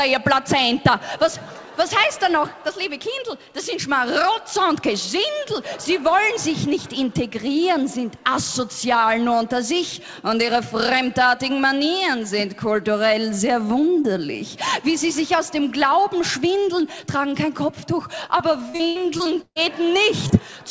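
From 18.38 to 19.58 s, repeated packet loss (robotic sound): seven gaps, the longest 143 ms, are patched by extending prior audio, leaving about 30% of that span concealed and choppy.

At 20.28–20.31 s, a short concealed packet loss fills about 16 ms of 20 ms of missing audio with extrapolated sound, heard as a brief smear or wobble.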